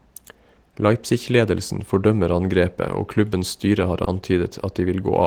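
At 3.29 to 3.39 s, just before "styre har", and again at 4.04 to 4.08 s, just after it, the speech shows a short stall from a late packet. The jitter buffer ran dry and the receiver held the last sound for about 20 ms, then resumed without loss, leaving a brief stretched hold with a faint buzz or dip.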